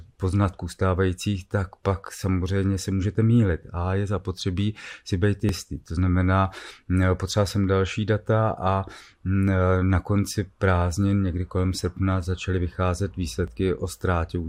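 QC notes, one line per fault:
5.49, 9.48, 13.48 s: overlap between stream segments. At each point a few milliseconds of speech are cut away, so the waveform jumps and a small click or skip is heard. The first comes after "je zapotřebí si být", the second just before "na konci prázdnin někdy", and the third after "kolem srpna začaly vycházet". They recur about every 4 s, which fits 4-second segment boundaries. Unlike a gap between segments, no silence is inserted; the sound jumps forward.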